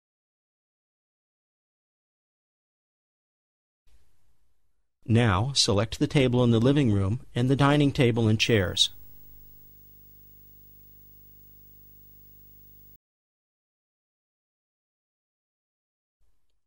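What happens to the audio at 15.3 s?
Nothing goes wrong at 15.3 s; the audio plays through that moment intact, with no dropout, click or other fault.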